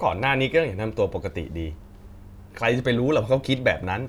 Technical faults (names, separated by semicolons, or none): none